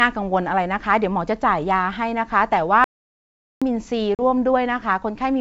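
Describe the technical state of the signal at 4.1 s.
Packet loss on an ADPCM call hits from 4.15 to 4.22 s: roughly four packets, about 40 ms of speech, drop out as a hard-edged silent gap. The decoder's predictor and step size lose track of the sender's, so speech resumes with brief distortion before settling.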